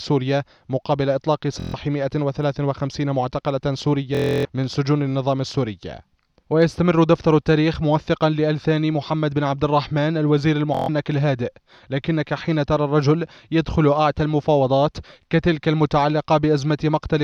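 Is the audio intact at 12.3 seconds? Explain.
Yes, the audio at 12.3 seconds is intact, with no dropout, click, distortion or other fault there.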